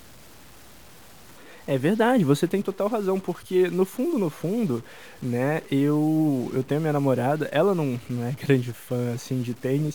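A stuck bit in the sample data, most likely from a broken data line or faulty converter, affects this speech recording from start to finish. One bit holds a fixed value, so about half the samples are pushed off by a step of around -45 dBFS, following the waveform. That adds a harsh, buzzy distortion to the speech. In the pauses the bit flips with the sign of quiet samples, filling the gaps with noise at about that level.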